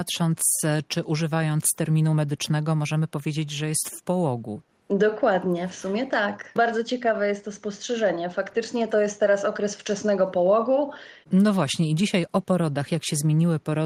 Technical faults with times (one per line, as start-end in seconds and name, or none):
none